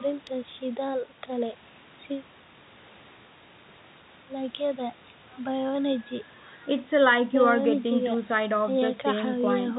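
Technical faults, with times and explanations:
Nothing stood out on listening to this speech clip beyond the narrow telephone-style band of a call path that carries nothing above 4 kHz.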